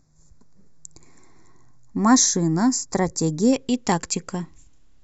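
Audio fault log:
0.0–3.53 s, channel delay (comb filtering): one channel lags a fraction of a millisecond, so the mono sum cancels at evenly spaced frequencies, first near 3 kHz, making the speech hollow. Unlike a phaser, the notches stay fixed; unlike a low-pass, treble returns between them.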